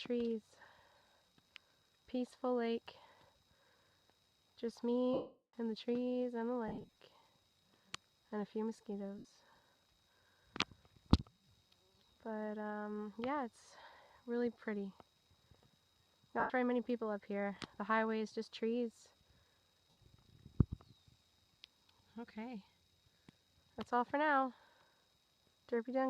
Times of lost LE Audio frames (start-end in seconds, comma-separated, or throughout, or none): 5.14-5.53, 6.68-6.89, 9.18-9.25, 16.40-16.50, 19.91